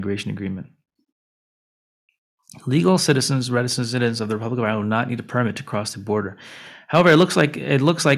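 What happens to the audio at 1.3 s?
Nothing goes wrong at 1.3 s: the speech runs through that moment intact, with no dropout, click, glitch or other audible fault.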